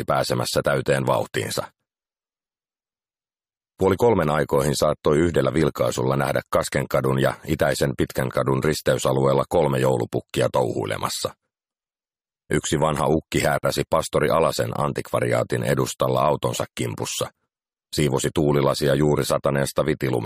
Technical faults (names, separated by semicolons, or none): gap at a join of encoded pieces